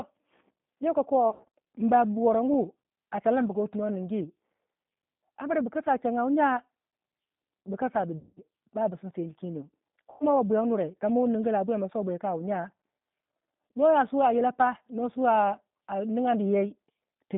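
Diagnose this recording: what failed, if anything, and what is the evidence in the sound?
Codec stage: G.729 coding at 8 kbit/s runs throughout, making the speech rough and synthetic. On a spectrogram the band is empty above 3.7 kHz and below 150 Hz.

Network stage: VoIP packet loss concealed by the speech codec at 1.30–1.45 s, 8.19–8.40 s and 10.10–10.24 s. The decoder stretches its last frame into a fading buzz or coloured noise, which shows as a smeared spectrum over a decaying waveform envelope.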